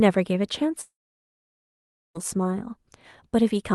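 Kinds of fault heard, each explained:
Long network dropout: At 0.81 s the speech breaks off, and the sound is not heard again until 2.17 s. The last sound carries on as a short fading buzz. Then about 1.2 s of near silence follows. Speech resumes further on, with roughly 1.3 s of it simply gone. This is likely a stretch of packets that never arrived. The receiver filled the gap with concealment, which soon ran out.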